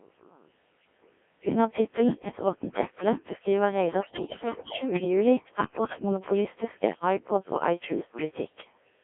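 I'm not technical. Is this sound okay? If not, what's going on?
No. The Codec 2 vocoder runs throughout. It rebuilds the speech from a few basic measurements instead of the real sound, so it comes out robotic and buzzy. Bit errors on digital voice radio hit from 4.02 to 5.04 s and again from 5.64 to 6.02 s. Scrambled data makes the synthetic voice jump in pitch and tone, breaking into warbles and gibberish.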